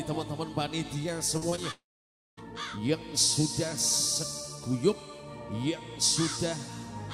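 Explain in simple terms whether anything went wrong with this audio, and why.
Around 1.37 to 1.59 s there are three tiny gaps, at 1.37, 1.50 and 1.56 s, each 20 to 40 ms, where the audio smears briefly. That's short concealed packet loss: the receiver guessed the missing bits by stretching what came before.

Right after, from 1.71 to 2.39 s, the sound trails off into a fading buzz or hiss, then goes silent for about half a second before coming back with a chunk missing. That's a long network dropout, likely a connection hiccup.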